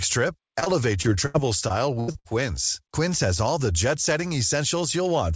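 Speech, carried over a call path with nothing above 8 kHz. From 0.60 to 2.27 s, repeated packet loss causes robotic sound: eight gaps, the longest 82 ms, are patched by stretching earlier sound.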